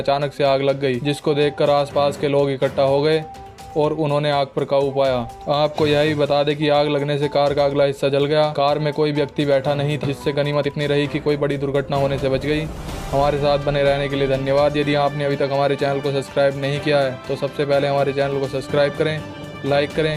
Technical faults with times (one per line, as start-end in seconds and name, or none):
10.03 skip ahead
10.27-12.52 jitter buffer speed-up